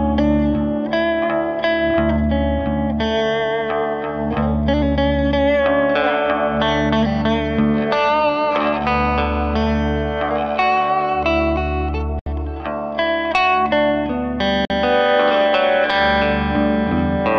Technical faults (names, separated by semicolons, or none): gap at a join of encoded pieces